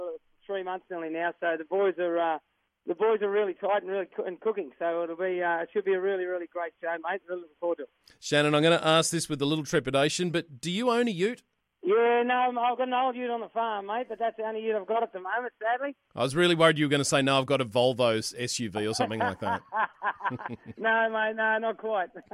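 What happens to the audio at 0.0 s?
Nothing goes wrong at 0.0 s; the audio is intact at that moment.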